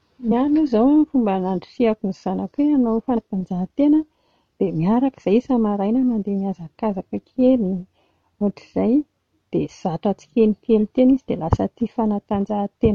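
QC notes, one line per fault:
0.30 s and 3.16 s, compressed frames skipped: the speech jumps ahead by about 50 ms, then about 100 ms, roughly two and four 23.2 ms frames lost in decoding. Overlapping neighbour frames smear each join into a soft blip. The waveform shows a sudden envelope discontinuity, and the spectrogram a thin vertical smear with time-shifted harmonics either side.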